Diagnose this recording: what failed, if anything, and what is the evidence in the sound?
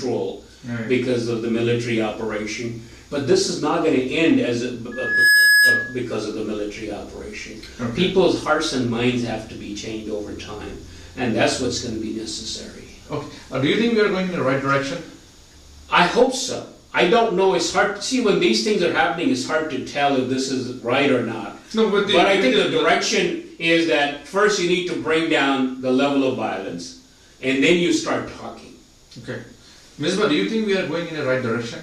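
The failure is loudspeaker feedback squeal, in the acoustic loop between a loudspeaker and the microphone feeding it. From 4.91 s to 6.02 s a single tone at 1.7 kHz rises out of the sound within roughly 0.4 s, then holds at about 10 dB above the programme. At that frequency the loop gain exceeded unity, so each trip around the loop reinforced the tone until it stopped growing, leaving a sustained squeal.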